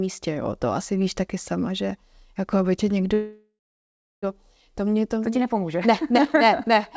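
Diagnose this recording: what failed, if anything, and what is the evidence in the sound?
Call audio freeze at 3.14–4.25 s, after "že jako aby tě": a fading buzz, then 0.69 s of blank spectrogram. Speech resumes intact, 1.09 s late, likely from a network jitter-buffer underrun.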